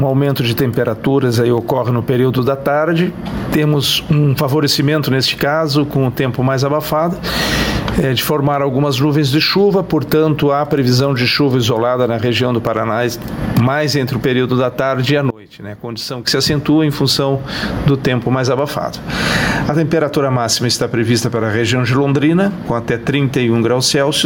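Gain pumping runs through the whole clip. The swing is large, around 20 dB, so loud and soft passages sit oddly close in level and the audio sounds squashed and breathing. The likely cause is input gain set far too high, with a fast limiter or compressor clamping down on each peak and releasing in the pauses. From 15.30 to 16.27 s there is a sudden collapse in level of about 24 dB, leaving only a faint residue of the sound. That points to one channel inverted. With one stereo side in reversed polarity, whatever is common to both channels cancels when they are folded to mono. Centred material and bass almost disappear, and only the small difference between the channels survives for that stretch.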